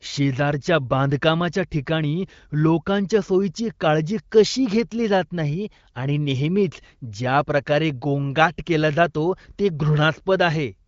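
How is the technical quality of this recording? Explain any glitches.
The technical quality of this recording is good, and there are no glitches to explain.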